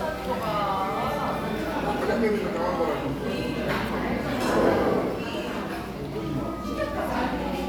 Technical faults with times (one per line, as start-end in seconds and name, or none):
none